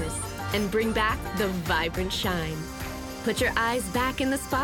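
No technical faults are audible anywhere in the audio.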